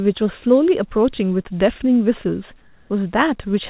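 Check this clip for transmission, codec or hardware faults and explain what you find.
One fault stands out in this speech clip, which came through a narrowband call path with nothing above 4 kHz.

Comfort noise in place of the background, 2.62 to 2.90 s: for 280 ms the real background, about 35 dB below the loudest speech, gives way to a steady, featureless hiss about 1 dB quieter. The likely cause is discontinuous transmission, with the receiver synthesising comfort noise while the sender paused.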